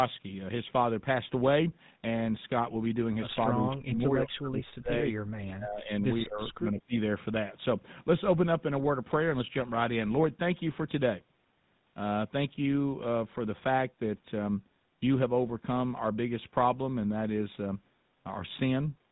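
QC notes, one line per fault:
Throughout: GSM full-rate codec. The voice has the buzzy, gravelly roughness of the original GSM speech coder, and the damage is plainly audible. The codec models the vocal tract and excites it with a regular pulse train built from only every third excitation sample, so fine detail is replaced by a coarse, grainy buzz. Nothing survives above 4 kHz, which leaves the sound dull. The quality fits a 13 kbps full-rate stream.
6.23 to 6.93 s: speech suppressed in double talk. The talker's level falls sharply, by about 30 dB at its deepest, over roughly half a second of this stretch. The likely cause is both ends talking at once. The echo canceller could not tell the near talker from the far-end echo, so it turned both down. That is why the voice dips instead of staying steady.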